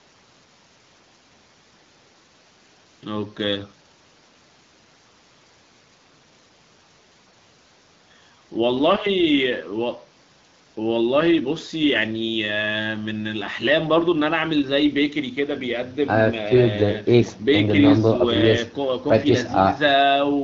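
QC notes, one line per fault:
The speech arrives through call microphone processing and the AMR wideband (HD Voice) codec at 12.65 kbit/s, with content ending by 8 kHz and only light coding traces at that rate.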